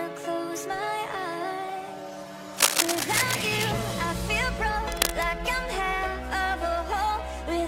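At 2.54 s a burst of cable scratch noise comes in and runs until about 3.67 s: dense, ragged crackling and rustling sitting right on top of the sound, roughly as loud as the sound itself. It returns more briefly from 4.92 to 5.26 s. That uneven, scratchy texture is most likely a worn cable or connector being moved, with its contact resistance jumping around and spraying noise into the signal.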